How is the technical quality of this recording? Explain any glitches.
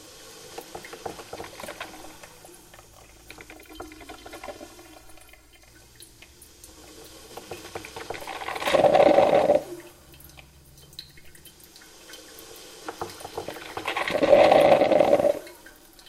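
Channel delay with comb filtering appears from 3.53 to 5.67 s. One channel lags the other by roughly 3 ms, and when both sum to mono, shared content cancels at evenly spaced frequencies starting around 150 Hz. The sound turns hollow and phasey.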